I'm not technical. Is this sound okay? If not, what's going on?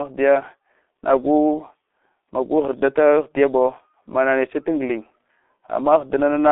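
No. G.723.1 codec damage runs throughout the speech, from start to finish. This old internet-phone codec squeezes speech into a tiny data stream by sending a rough model of the voice in 30 ms chunks. The line keeps only about 250 Hz to 3.6 kHz, and nothing above 3.8 kHz survives. Speech therefore sounds muffled, thin and hoarse, and because the model updates slowly, consonants smear together.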